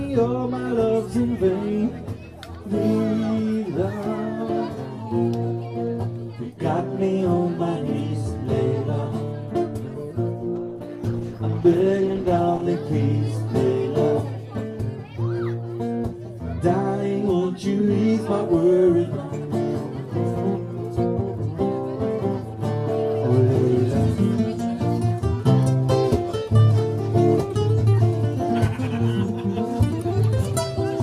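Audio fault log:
10.56–12.69 s, call bitrate drop: the sound turns coarse, watery and dull, as the encoder's bit budget collapses, which fits a fall from around 96 kbps to roughly 14 kbps, held for about 2.1 s. With so few bits, detail is quantised away and the top band is discarded. On a spectrogram, energy above a few kHz abruptly vanishes and the remaining bands look smeared and blotchy; the waveform envelope barely changes.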